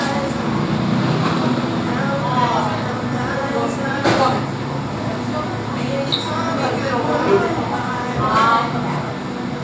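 Nothing's wrong with this one: the sound has just been through a call's microphone processing, so the very lowest bass is trimmed and nothing reaches above about 8 kHz, which is exactly what that path normally does.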